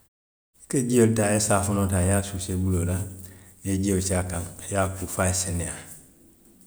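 No technical faults are audible in this speech.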